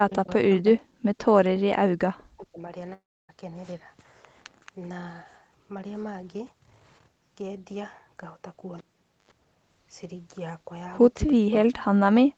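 From 0.08 to 1.22 s the speech sinks and breaks up: level falls by as much as about 40 dB, and roughly seven tenths of a second within that stretch is pulled down or chopped into fragments. This is speech suppressed in double talk, likely caused by the far side talking at the same moment. The echo canceller could not tell this talker from its own loudspeaker echo and turned everything down. The same dipping, broken pattern returns from 2.29 to 2.72 s, affecting about four tenths of a second and again dropping by around 40 dB.

Just before that, at 2.18 to 2.23 s, a faint, brief scrap of delayed sound slips through, sitting about 35 dB below the speech and trailing it by 438 ms. That is likely an echo leak: a loudspeaker on the far end fed the call back into its microphone, and its echo canceller let a small remnant through to be sent back here.

From 2.93 to 3.31 s the audio is replaced by a fading buzz that thins into silence lasting about 0.29 s. 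When the sound returns, about 0.36 s of it is simply gone. This is a long network dropout, likely from packets that never arrived. The receiver stretched the last sound it had to cover the gap, then gave up and left the hole silent.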